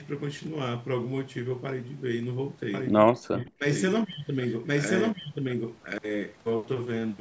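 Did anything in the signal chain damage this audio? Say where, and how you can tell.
Yes. From 2.74 to 5.98 s, a doubled audio track: an equally loud copy trails by about one second, likely from a slower capture path, showing as repeated, shifted spectrogram patterns.

Call processing: speech is suppressed in double talk from 3.12 to 3.65 s. The echo canceller, likely confused, dropped the level by roughly 40 dB, a deep waveform notch.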